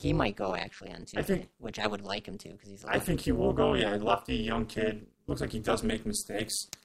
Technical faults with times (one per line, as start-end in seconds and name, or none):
0.00-6.85 overlap-add ripple